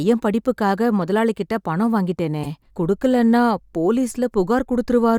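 Speech, marred by two instances of corrupt frame decoded: damaged compressed frames were played anyway, so the decoder put energy at the wrong frequencies. From 1.01 to 1.09 s a faint glitch spans what sounds like a few frames, and from 2.43 to 2.47 s a much louder glitch covers a couple. On a spectrogram each shows as a short block of misplaced energy breaking the speech harmonics; the waveform shows the second as a clear spike, the first barely.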